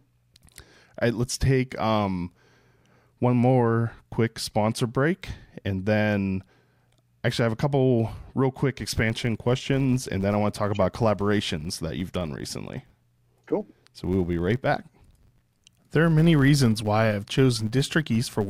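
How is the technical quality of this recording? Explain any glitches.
The first half is clean, but from 8.83 s, right after "a couple real quick", to the end, a filter restarted on every block adds a 100 Hz buzz. The filter loses its state every 10 ms, so each block starts with a small transient. These are heard as a level-following buzz, seen as regular waveform spikes and 100 Hz spectrogram striping.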